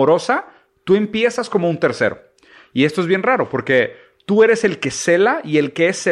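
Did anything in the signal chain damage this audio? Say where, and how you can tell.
No, nothing in the signal chain damaged this audio.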